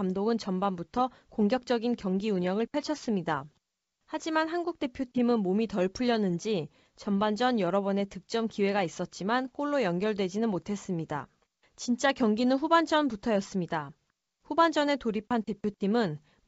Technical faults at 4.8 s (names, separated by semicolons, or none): none